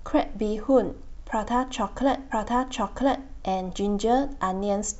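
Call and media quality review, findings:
Stream segment repeated, 2.30–3.30 s: player fetched or queued the same segment twice. About 1 s of speech replays, small blip at the jump back.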